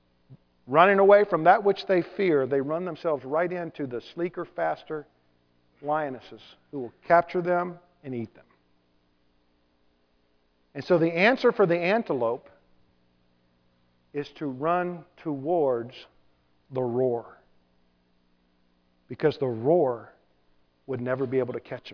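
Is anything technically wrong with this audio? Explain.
No, nothing technically wrong can be heard in this audio.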